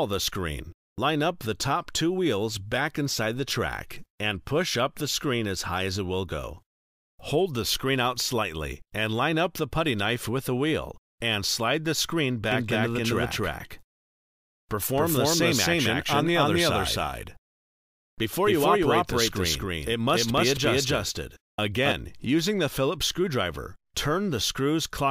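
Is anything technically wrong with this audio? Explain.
Yes. From 12.52 s to 21.92 s there is a doubled audio track: every sound is heard twice, the second copy trailing about 300 ms behind at roughly the same loudness, with no decay or room colour, so it reads as a flat, stuttering echo that switches on and off abruptly. The likely cause is the same signal being captured again through a slower path, or an edit leaving two copies mixed out of step.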